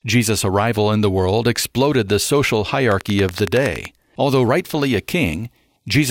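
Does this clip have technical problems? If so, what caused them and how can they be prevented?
Yes. Just after "world exploded the social", from 2.92 to 3.86 s, a regular ticking of about ten sharp clicks at 10.7 per second cuts through, peaking roughly 15 dB above the speech. This train of clicks is likely interference or a faulty connection or power supply injecting repeated pulses of much the same shape. Keeping cables away from other equipment and using sound connections and a clean power supply prevents it.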